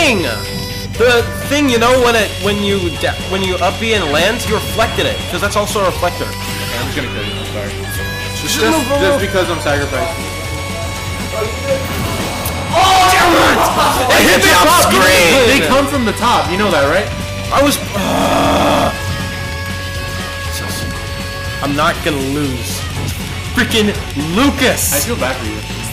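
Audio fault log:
No technical faults are audible anywhere in the signal.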